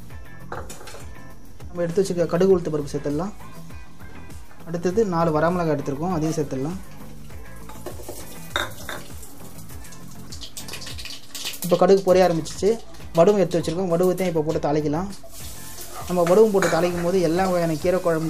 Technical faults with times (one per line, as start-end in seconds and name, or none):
0.00-18.29 DC offset